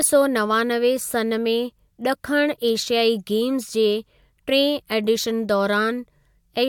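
No technical faults are audible.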